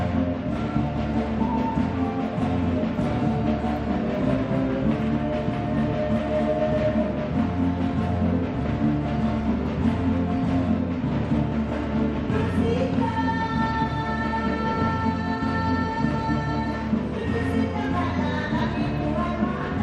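DAB burbling appears at 3.04 to 3.12 s, 9.41 s, 11.23 s, 14.64 to 14.89 s and 18.67 to 18.88 s. Bit errors of a small fraction of a percent slip past error correction, corrupting MP2 audio data so single sub-bands get short blips of noise rather than dropout silences.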